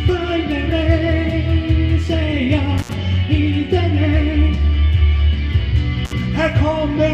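The audio drops out with a crackle at 2.78–2.94 s and again at 6.05–6.13 s, gaps of about 70 and 53 ms. This is intermittent contact from a loose cable or plug.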